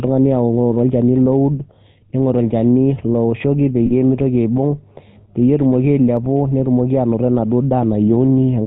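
The whole clip has GSM full-rate codec colouring. The speech has that buzzy, gravelly roughness you get when the vocal tract is modelled and fed a thinned-out pulse excitation, and nothing comes through above 4 kHz. It's plainly audible and fits a 13 kbit/s stream.

At 3.86 s there's a brief stretch of lost GSM frames, running to about 3.91 s. Roughly 40 ms of bad data were covered by repeating the last good frame, so the sound holds on a short, rough, metallic ring.

At 6.17 s there's a single sharp click, the kind of thin vertical line a jump in the waveform leaves. It's likely dropped samples, maybe a couple of them, far too few to take out any sound, just enough to break continuity.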